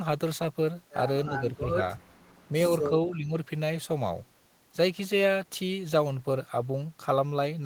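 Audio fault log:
1.29–1.79 s, speech suppressed in double talk: with both ends likely talking at once, the echo canceller could not tell this talker from returning loudspeaker echo and pulled the gain down on both. The speech sinks by a modest amount, roughly 5 dB, for most of that half second.
3.08–3.36 s, speech suppressed in double talk: the same likely double-talk confusion clamps harder, and the speech dips by around 10 dB for about a fifth of a second.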